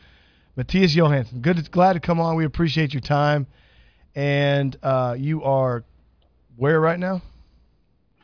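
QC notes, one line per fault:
No faults found.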